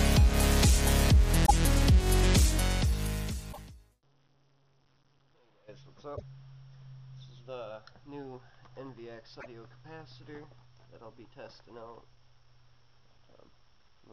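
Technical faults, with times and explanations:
1.43–1.51 s, 3.49–3.59 s, 6.13–6.22 s and 9.37–9.46 s, damaged data in a compressed stream: four short glitches, each lasting about a tenth of a second, cut sharply into the sound. In each spot, part of the compressed data was wrong or missing. The decoder misread the frames there and lost sync. It then searched for the next valid frame header and recovered.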